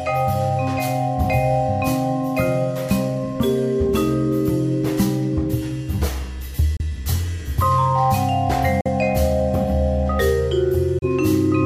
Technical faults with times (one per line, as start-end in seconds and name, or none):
6.77-6.82 Bluetooth dropout
8.81-8.86 Bluetooth dropout
10.99-11.06 Bluetooth dropout